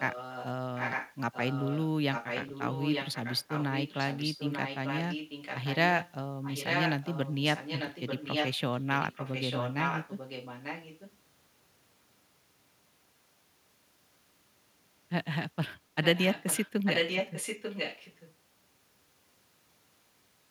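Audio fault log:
0–0.47, 0.75–1.87, 2.12–5.77, 6.0–6.13, 6.42–11.15 and 16.03–18.34 s: echo leak. A copy of the speech trails 893 ms behind, mostly just a few dB under the main voice and fainter in the brief bits, likely a far-end loudspeaker whose echo canceller let it back through.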